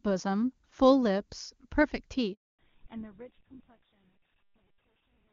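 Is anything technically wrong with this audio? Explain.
Yes, this speech recording has two related faults in the middle of the call.

A handover gap runs from 2.33 s to 2.59 s. While the call was switched between networks, no speech frames reached the receiver, so the voice dies away within a few tens of milliseconds and leaves 260 ms of silence until the new link starts delivering audio. Whatever was said during that interval is gone, not merely muffled.

From 2.59 s to the end there is a fallback to narrowband. Before the gap, the wideband HD Voice sound is clear, consistent with AMR-WB near its top rate of 23.85 kbit/s. Afterwards, nothing above 4 kHz survives, which points to the new path using an older narrowband codec such as GSM full rate. Losing the upper band removes sibilance and air, so the voice turns duller and rougher. The smooth fade-out that begins around 2 s further lowers the level over this stretch.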